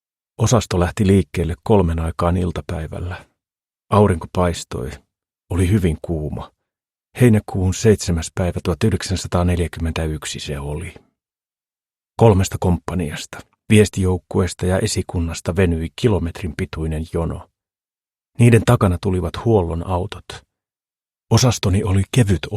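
No technical faults are audible.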